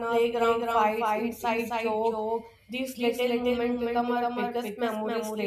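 A doubled audio track runs throughout: the speech is repeated about 300 ms late, only about 5 dB quieter, likely a second capture path or misaligned edit.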